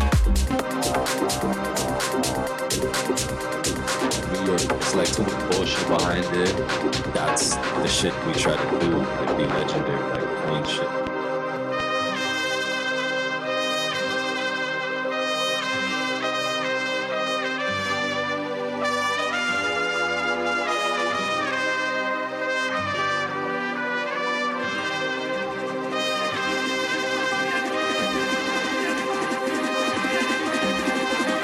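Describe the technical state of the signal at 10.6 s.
At 10.6 s the signal sits inside a train of clicks running from 9.45 to 11.81 s, most likely from interference from nearby equipment or a faulty connection injecting short pulses into the path. About three similar clicks arrive each second at an uneven pace, around seven in all, peaking well above the surrounding sound. They are heard as sharp ticking or popping laid over the audio and persisting through any gaps.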